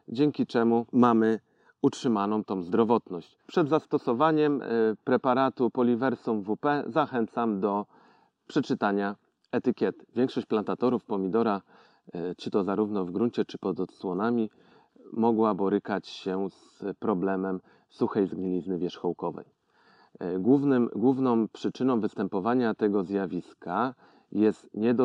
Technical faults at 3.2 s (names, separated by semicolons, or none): imaging from linear upsampling